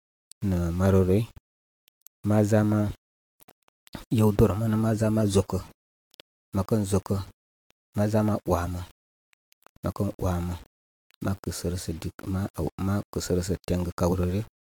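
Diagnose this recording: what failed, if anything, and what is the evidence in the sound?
The speech carries a grainy, gritty distortion the whole way through that rides along with the signal, roughening the quieter passages and making soft tails sputter instead of fading cleanly. That points to the sample-format conversion stage, most likely low bit depth without dither. The grain sits only around 30 dB below the speech, which fits something like 7-bit rounding. Because there was no dither, the error tracks the sound and is heard as distortion, not steady hiss.

On top of that, the whole clip sounds swirly, smeared and hollow, with consonant attacks blurred, and there's nothing above 19.2 kHz. The damage is worse than a single decent-rate lossy encode would produce. That suggests generation loss at the codec stage, likely from around seven AAC-LC passes at roughly 120 to 140 kbit/s each. 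Every re-encode quantises again on a shifted frame grid, so noise and spectral holes stack up from one pass to the next.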